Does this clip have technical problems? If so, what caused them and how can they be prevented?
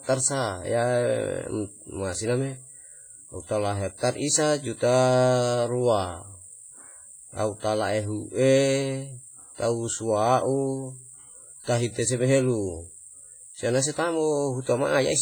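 Yes. Throughout, the speech sounds ringing and washy, with breathing hiss, likely from heavy WMA compression at roughly 24 kbps; a spectrogram shows smeared, gappy detail and nothing above 21 kHz. Encoding at a higher bitrate or with a more modern codec would prevent it.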